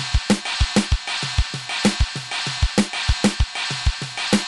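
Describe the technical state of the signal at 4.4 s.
At 4.4 s the signal is intact, with no fault to be heard at that moment.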